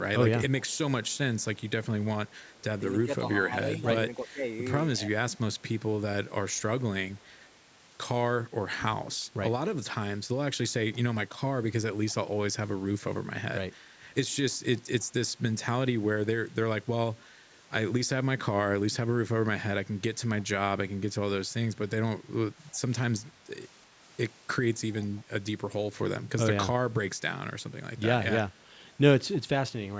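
From 0.68 to 7.35 s there's an echo leak: a faint delayed copy of the speech trails it by about 319 ms, around 35 dB down, most likely a far-end echo canceller letting some loudspeaker pickup through. Inside that stretch, between 3.05 and 5.12 s, speech is suppressed in double talk. With both sides talking, the canceller likely ducked the talker too, giving brief dips of roughly 15 dB that add up to about a third of a second. The same 319 ms echo leaks back in short bursts at 14.52 to 15.05 s, at about 35 dB down, and at 20.40 to 20.44 s and 25.01 to 25.18 s, at about 30 dB down.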